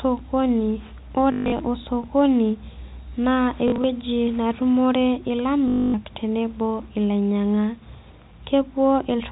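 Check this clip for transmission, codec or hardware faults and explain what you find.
There is one fault here: packet loss with the last packet repeated. It occurs three times: 1.32 to 1.6 s, 3.68 to 3.84 s, and 5.68 to 5.94 s. Missing packets were replaced by replaying the previous one. The repeats buzz at about 50 Hz, which fits 20 ms packets. The longest unbroken gap, at 5.68 s, gives a robotic stutter. The narrow telephone band of the G.711 coding is audible throughout.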